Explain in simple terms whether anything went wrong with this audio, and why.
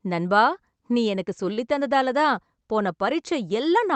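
Something did go wrong once, at about 1.53 to 1.59 s, just after "நண்பா நீ எனக்கு". This is a short stall from a late packet. A piece of the speech arrived late on its way through the call connection, so the receiver stretched the last sound for about 38 ms while it waited, then carried on from the same point. Unlike a lost packet, nothing is cut out. One sound is simply held a touch too long, with a faint buzz or dip.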